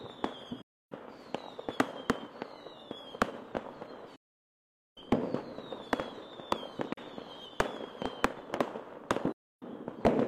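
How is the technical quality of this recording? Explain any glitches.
The quality is compromised by AAC frame loss with muting, heard four times. Encoded frames failed to arrive, and the decoder zeroed their spectrum, leaving silence. Overlapping transform windows fade the audio out and back in, so each run of lost frames is a soft-edged hole and the single lost frame a brief dip. Gaps fall at 0.62–0.92 s, 4.16–4.98 s, 6.93–6.98 s and 9.32–9.63 s, lasting 0.3 s, 0.81 s, 0.04 s and 0.3 s. The shortest fits a single lost frame of about 43 ms.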